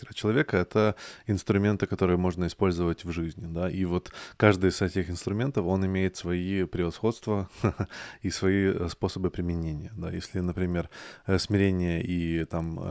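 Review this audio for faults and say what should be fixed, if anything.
From 10.08 s to 12.9 s, right after "способы применения да", a 25 Hz buzz of regular ticks rides on the speech. It comes from the resampler restarting on every block: each 40 ms block was converted from 24 kHz to 16 kHz alone, leaving an error at every edge. Keeping the resampler's filter state continuous across blocks prevents it.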